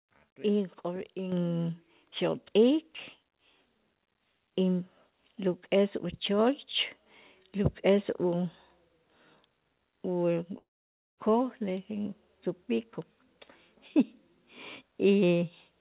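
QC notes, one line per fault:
1.32 s, microphone volume stepped up: speech and background noise jump together by about 7 dB in one step, as the input gain was raised.
10.58–11.19 s, long network dropout: the last sound smears into a fading buzz, then near silence for about half a second; the missing audio was likely lost in transit.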